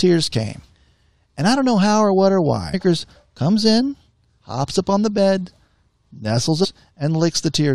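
Damaged data in a compressed stream produces brief glitches at 0.34 s, at 2.73 s after "how or what or", at 4.40 s between "comes in" and "hops up on the", and from 6.63 to 6.65 s. Corrupted frames make the decoder lose sync and search for the next frame header.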